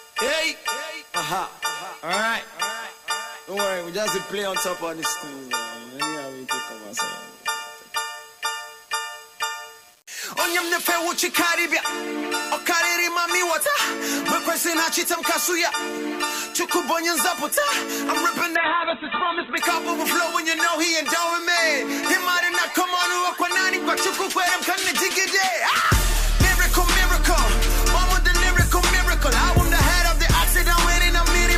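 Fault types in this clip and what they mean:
Low bit depth without dither: A grainy distortion runs through the whole clip and shifts with the sound. It sits about 30 dB below the signal and is likely from rounding to about 7 bits without dither. Quiet passages turn gritty.
Call bitrate drop: From 18.56 to 19.65 s, the sound turns rough and muffled. The top end is cut off above 4 kHz, down from 20 kHz. The coarseness fits an encoder forced from about 64 to 8 kbps, and the lowest point lasts about one second.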